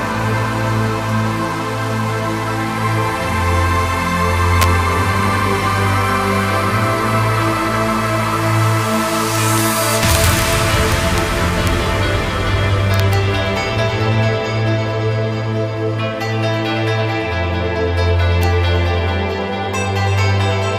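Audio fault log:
4.62–4.64 s, 9.36–9.61 s, 10.03–10.53 s, 10.92–11.18 s, 11.67 s, 12.94–13.13 s and 18.43 s: integer overflow. Loud peaks pushed only about 0 to 2 dB past full scale, and instead of being limited they wrapped to the opposite sign. Each one snaps across the whole range, producing harsh cracks far sharper than clipping. On the waveform, peaks jump abruptly to the opposite extreme, and the spectrogram shows bright full-band vertical streaks at each crack.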